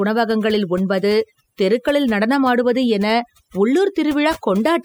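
Overdone noise removal runs through the whole of this speech recording, from start to end. A noise reduction stage set far too aggressively is pulling individual frequency bands down or cutting them out whenever they sit close to its noise estimate, and the quieter parts of the voice are being removed along with the noise. The background drops and breaks up into twinkling specks.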